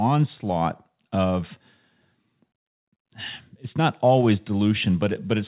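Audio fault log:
No fault to log for this speech clip, which comes through a phone-call path that carries nothing above 4 kHz.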